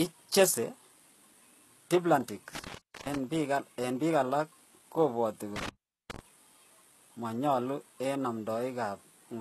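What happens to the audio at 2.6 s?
At 2.55 s a loose cable or plug in the signal path briefly lost contact, an intermittent contact fault lasting until about 3.18 s. The line was open for about 0.39 s of that span, so the speech drops out with crackle at each edge and faint hiss in between.

Underneath, the whole clip was likely encoded with HE-AAC compression at a very low bitrate, consistent with about 16 kbps. The treble is synthesized from lower bands rather than preserved, and nothing remains above 12.4 kHz, so sibilants sound gritty and metallic.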